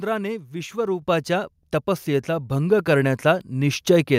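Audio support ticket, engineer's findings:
Microphone volume stepped up at 1.02 s (about 7 dB) and 2.79 s (about 3 dB, right after "तपस्येचा भंग"). Speech and background jump together. Component: client auto-gain on capture device. Software judged input too quiet, raised device input volume in single steps.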